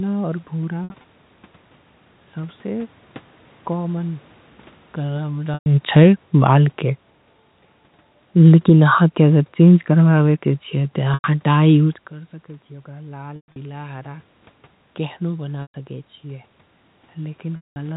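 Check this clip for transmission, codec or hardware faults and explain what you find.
Three kinds of fault appear: repeated packet loss, and the automatic gain control turning down and then back up.

Packet loss with pitch repetition occurs at 0.84 to 1.04 s, 5.54 s, 11.14 s, 13.36 to 13.56 s, 15.62 s and 17.56 to 17.76 s. Lost audio, 100 to 200 ms each, was bridged by repeating the last pitch period. That gives a held, buzzy tone fading into brief silence, worst in the 200 ms gap.

Automatic gain falling runs from 8.35 to 12.14 s. The control judged the input too loud and lowered gain by about 7 dB, so the sound and its background sink together.

Automatic gain rising follows, from 12.11 to 14.32 s. After the talker moved away around 12 s, the input dropped about 17 dB. The control added about 4 dB, and voice and room noise swell together.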